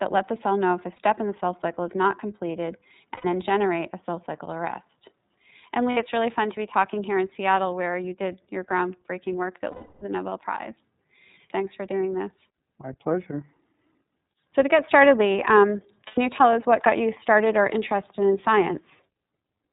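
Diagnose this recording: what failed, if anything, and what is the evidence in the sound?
iLBC codec, throughout the recording, at the codec stage: nothing above 4 kHz survives, and the speech has a plainly audible rough, synthetic edge. That fits 13.33 kbps iLBC, where each 30 ms frame's excitation is coded on its own, trading naturalness for robustness.

Lost iLBC frames, a network-stage fault, at 0.96 s (30 ms), 3.15 s (90 ms), 5.91 s (60 ms), 9.71 to 10.03 s (300 ms) and 16.07 s (90 ms). Each gap sounds like a held, buzzy vowel as the decoder repeats the last pitch cycle with noise, fading through the long 9.71 s gap. Clear speech returns almost immediately because frames are independent.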